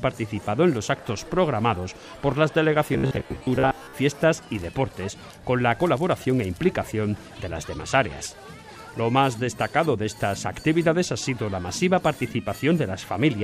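Robotic sound from repeated short buffers runs from 2.93 to 3.93 s: a rigid 66.7 Hz buzz, likely from about half the audio being replaced by repeats of a 15 ms chunk.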